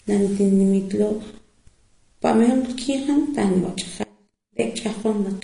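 MP3 compression runs throughout this speech clip: nothing above 10.6 kHz, with watery, swirling damage, likely from a low bitrate such as 40 kbps. An audio dropout to a faint residue occurs from 4.04 to 4.59 s. The sound cuts abruptly for 0.56 s, leaving only faint sound about 25 dB down, likely from a brief signal loss.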